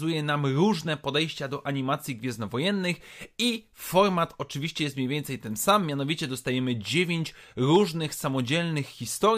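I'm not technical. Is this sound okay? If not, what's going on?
Yes, this recording sounds fine. I can't hear any technical problems anywhere in the speech.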